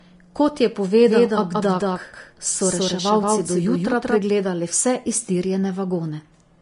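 From the start the speech has a hissy, grainy top with smeared consonant attacks and nothing above about 10.6 kHz, which sounds like Vorbis compression at a low setting, likely somewhere near 34 kbps, with the treble quantised so coarsely that detail turns to noise. Then from 1.07 s to 4.17 s there's a doubled audio track: a second, equally loud copy of the speech trailing roughly a fifth of a second behind, bone dry and cutting in and out abruptly, probably from a slower capture path.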